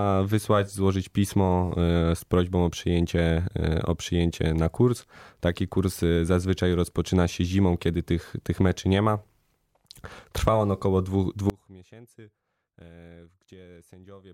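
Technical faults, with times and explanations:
11.50 s to the end: audio dropout to a faint residue. Right after "on około dwóch" the speech cuts out abruptly rather than pausing or fading, and only a faint trace of the sound remains, roughly 25 dB below its normal level, until the clip ends. This likely comes from the signal feed failing while the downstream path stayed live. On a waveform the envelope collapses in one step to a thin sliver, and a spectrogram shows a sharp vertical edge followed by a dim band.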